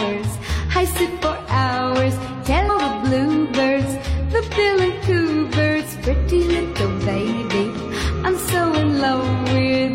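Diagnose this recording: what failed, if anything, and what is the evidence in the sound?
The failure is in the codec stage, from damaged data in the compressed stream. At 2.68 s there is a brief glitch, a blip lasting under 20 ms that does not belong to the surrounding sound. Part of the compressed data there was wrong. Bytes were lost, zeroed or overwritten. The decoder misread those frames and lost sync. It then searched for the next valid frame header and resumed decoding from there.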